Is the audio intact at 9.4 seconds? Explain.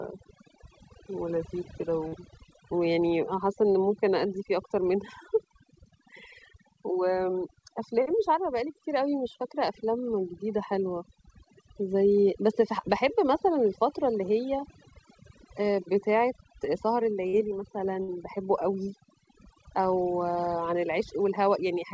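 No. At 9.4 seconds, as through the whole clip, there is overdone noise removal. The suppressor pulls individual frequency bands down hard wherever they sit close to its noise estimate, so the background collapses into near silence dotted with twinkling specks, and softer parts of the speech vanish with it. Unlike codec coding noise, the artefacts follow the noise floor, and the background is gated away rather than roughened. The 8 kHz ceiling is separate and fits a G.722 call path.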